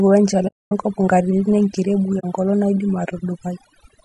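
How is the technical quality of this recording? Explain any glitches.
The technical quality is poor, with three distinct problems.

Overdone noise removal runs through the whole clip. The suppressor is set too aggressively, so frequency bands near its noise estimate are driven down or switched off, taking quieter speech detail with them. The background collapses to near silence with twinkling specks.

The speech also carries plainly audible codec damage, likely from low-delay AAC compression (AAC-ELD) at a low bitrate. Its short frames resolve pitch harmonics poorly and spend bits inefficiently. The result is a rough, grainy voice with noise filling the gaps between harmonics and a dulled or synthetic-sounding top band.

AAC frame loss with muting causes two dropouts, from 0.47 to 0.72 s (about 240 ms) and from 2.19 to 2.25 s (about 40 ms). The decoder zeroes the spectrum of the missing frames, and the overlapping windows fade the sound out and back in, leaving soft-edged holes.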